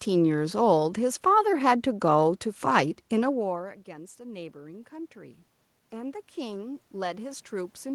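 From 3.35 s to the end at 7.95 s, the voice and the room noise behind it swell up together over several seconds. This is automatic gain rising: after the talker moved away around 3 s, the input fell by about 21 dB, and the gain control slowly raised its gain to compensate.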